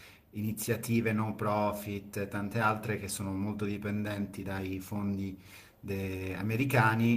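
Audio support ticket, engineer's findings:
No faults found in speech.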